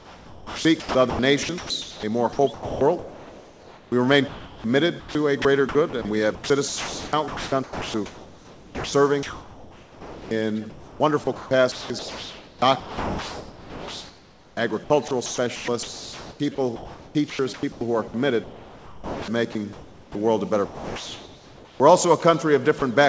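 From 0 to 20.15 s the sound is chopped by the voice detector: it repeatedly cuts in and out, and about 12.3 s of that stretch is swapped for flat synthetic fill. The cause is likely a sender-side detector toggling transmission on and off. Unlike a single dropout, the sound has several holes across the stretch.

Between 20.66 and 21.80 s, comfort noise replaces the background. The real ambience, which sits about 22 dB below the loud parts, becomes a steady, featureless hiss about 4 dB quieter. This is likely discontinuous transmission with the receiver generating noise. It differs from chopping because the substitution is one continuous block with no flicker.

At 21.78 to 21.80 s, the onset is clipped by the voice detector. The first 20 ms of the returning sound are missing, so it starts abruptly, without its soft attack. The likely cause is the detector reacting late to the restart. Unlike a dropout, only the beginning is lost.

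At 22.79 to 22.82 s, sound is dropped by the voice detector. Roughly 30 ms of sound is replaced by comfort noise and then returns, likely because the detector mistook it for background. Throughout, the G.722 call path leaves nothing above 8 kHz.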